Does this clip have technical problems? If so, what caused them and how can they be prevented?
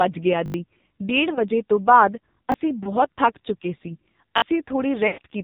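Yes, there are three kinds of fault here.

The AMR narrowband mobile codec runs through the whole clip, and it's heavily damaged. Nothing above 4 kHz makes it through, so the speech is dull and boxy. It's also buzzy and synthetic, which points to one of the lowest AMR-NB modes, around 5.9 kbps. At that rate the vocal-tract model gets very few pulses per 5 ms subframe and can't rebuild much natural texture. To prevent it, use a wideband codec or a higher AMR mode end to end.

There's a repeated buffer at 0.46 to 0.54 s, where a tiny slice plays over and over with hard joins. It comes across as a quick buzzy stutter, and roughly 70 ms of real audio is skipped. Shorter ones follow at 2.52 s and 4.38 to 4.42 s. The repeat length fits a 20 ms buffer, so playback was starved and the device looped its last block. To prevent it, give the playout buffer more headroom so new audio arrives in time.

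There are also lost AMR speech frames. At 1.34 to 1.41 s and 2.84 to 2.95 s you hear a brief dip and warble, each about 20 ms of missing audio. The decoder fills the gap by reusing the last good pitch and spectral settings with falling gain. Near the end, at 5.08 to 5.19 s, about 100 ms goes. The sound smears out and fades before coming back rough. To prevent it, improve radio coverage or use stronger channel coding.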